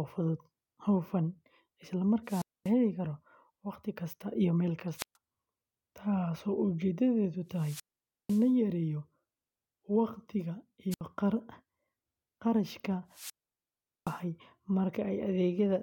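Wireless microphone squelch dropout occurs five times in this speech: 2.25–2.71 s, 4.96–5.16 s, 7.53–8.51 s, 10.91–11.01 s and 13.10–14.22 s. Each time the radio link weakens, hiss swells, and the receiver's squelch then mutes for roughly 240, 130, 500, 70 and 770 ms before the voice returns. That rising static ahead of each silent gap separates it from a digital packet dropout, which cuts out abruptly without any warning noise.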